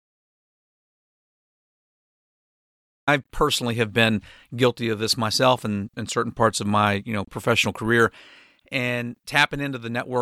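From the very start until about 3.08 s, the input signal was cut off, most likely through a disconnected device, a failed link or an accidental mute, while recording carried on writing zeros. The result is an audio dropout to silence: the clip opens already inside a stretch of dead digital silence with no room tone at all, and the speech then starts abruptly mid-flow at "personally have been guilty", with anything said before it lost.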